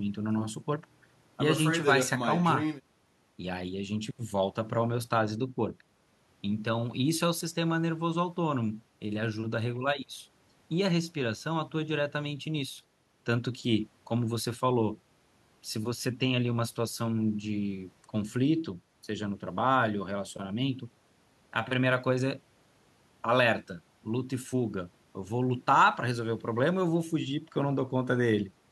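No technical faults can be heard anywhere in the speech recording; the signal stays steady and intact throughout.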